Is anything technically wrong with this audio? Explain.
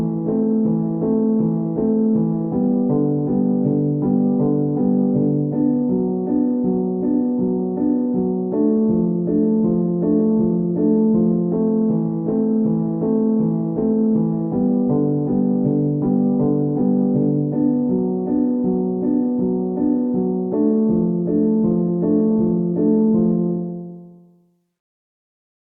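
No, nothing is technically wrong with this audio.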